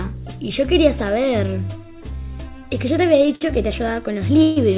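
Audio carried over a narrowband call link, with nothing above 4 kHz, which fits a G.711 A-law path at 64 kbps, has two timing faults. At 3.35 to 3.43 s there is a short stall from a late packet. The jitter buffer ran dry, so the receiver stretched the last sound for about 54 ms until the packet turned up, then carried on from the same point. The result is a briefly held, slightly buzzy sound, with nothing cut out. It differs from a freeze in being too short to fade. At 4.43 to 4.58 s comes a call audio freeze, likely caused by packets being held up in transit until the buffer emptied. Here the concealment runs for about 134 ms, long enough to be heard as a decaying buzz, though it never drops to full silence before the audio resumes exactly where it stopped. Unlike a packet-loss dropout, no sound is missing. Instead a gap has been inserted, pushing everything after it about 134 ms later.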